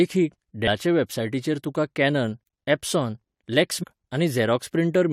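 At 3.82 s a brief glitch cuts through the speech, ending by 3.84 s, roughly 20 ms of damage where the sound should be. It is damaged data in a compressed stream: a short run of the encoded file was corrupted, so the decoder misread or refused those frames, lost its place in the bitstream and searched for the next valid frame header before it resumed normal decoding.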